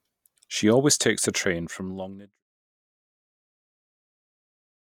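No faults in the speech; the level eases out in a smooth editor's fade from around 1 s, finishing at 2.43 s with no click or hard edge.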